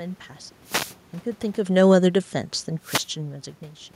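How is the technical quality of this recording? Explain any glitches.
The recording has two technical faults.

From 0.63 to 0.97 s there is a wireless microphone noise hit. The FM radio link faded as reflected signals cancelled, so receiver noise rose through the speech and is heard as a brief swish of static lasting about a third of a second.

From 1.63 to 2.49 s the automatic gain falls by about 3 dB. The gain control judged the input too loud, or its background noise too strong for the gain it started with, and pulled its gain down gradually, so the speech and the room noise behind it sink together over almost a second. This is separate from the natural level shifts as the talker moves, around one and a half and three seconds in.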